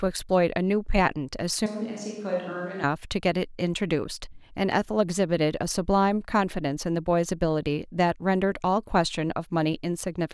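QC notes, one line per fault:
1.66–2.84 s: switch to a distant microphone. The speech turns abruptly roomy and hollow, with thinner bass. Level drops by about 5 dB, and room noise rises to roughly 35 dB below the speech. The close microphone likely dropped out, leaving a farther pickup. Both transitions are sudden.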